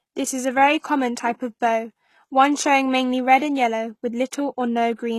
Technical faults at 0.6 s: HE-AAC compression

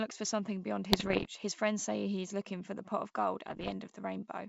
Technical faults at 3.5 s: bit errors on an ADPCM link

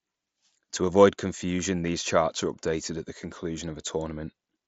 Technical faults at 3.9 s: none

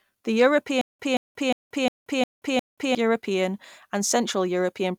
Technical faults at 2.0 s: stutter with silent gaps

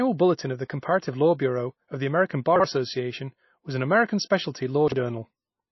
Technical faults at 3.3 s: MP3 compression

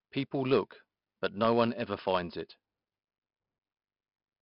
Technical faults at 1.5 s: 4-bit ADPCM compression

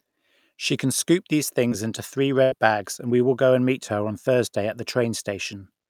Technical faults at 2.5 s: burst of packet loss

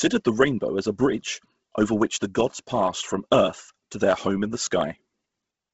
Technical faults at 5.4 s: Bluetooth LC3 compression

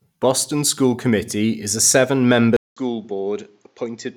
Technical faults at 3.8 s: input switched to a poorer device

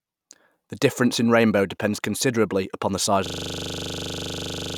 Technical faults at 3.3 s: system hang loop

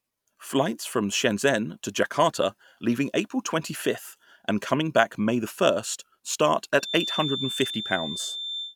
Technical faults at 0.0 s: none

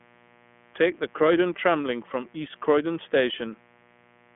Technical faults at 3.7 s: mains buzz; iLBC codec

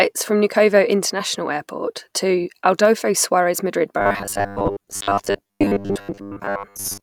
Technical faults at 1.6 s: none

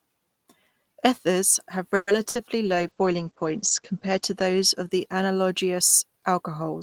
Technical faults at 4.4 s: call bitrate drop

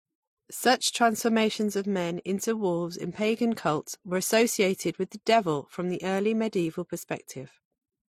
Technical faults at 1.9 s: transcoding between lossy codecs

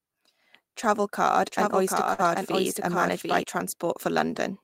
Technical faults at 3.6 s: dropped buffer (overrun)

